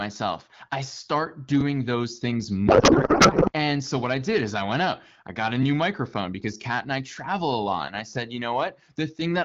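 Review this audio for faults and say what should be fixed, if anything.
From 2.67 to 3.53 s, right after "those things", a codec payload misread turns the speech into garbled noise and warble that barely follows it. This points to octet-aligned AMR being unpacked as bandwidth-efficient, so the decoder reads every field from the wrong bit position. On a spectrogram, the harmonic stripes give way to smeared, structureless energy for that stretch. In the waveform, the envelope stops following the syllable rhythm until 3.53 s. The surrounding AMR-WB coding sounds consistent with a 12.65 kbit/s stream and shows light codec damage. To prevent the misread, make sure both ends negotiate and apply the same AMR payload packing (the octet-align parameter in SDP).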